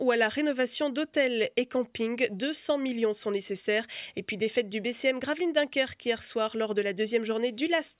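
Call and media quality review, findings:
Nothing stood out on listening, with no audible defects or anomalies to log against this clip.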